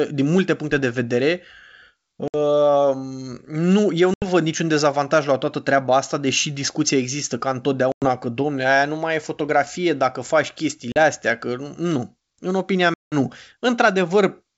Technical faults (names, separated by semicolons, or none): packet loss on an ADPCM call